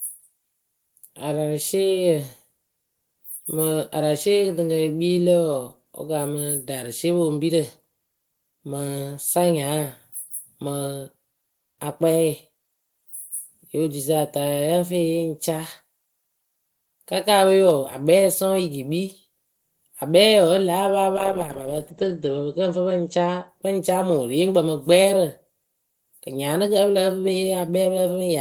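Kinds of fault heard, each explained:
Call bitrate drop: from 21.17 to 23.54 s the encoder is starved of bits, so it codes the speech more coarsely and discards the top of the spectrum. The speech turns muffled and watery, which fits a fall from about 32 to 15 kbps, and the worst stretch lasts about 1.15 s. On a spectrogram, energy above 8 kHz vanishes, leaving a flat ceiling where content had reached 20 kHz.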